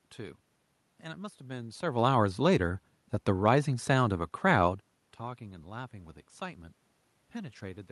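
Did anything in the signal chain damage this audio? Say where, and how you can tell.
No, nothing in the signal chain damaged this audio.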